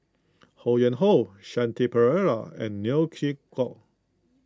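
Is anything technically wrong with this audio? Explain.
No, I can't hear any technical problems here.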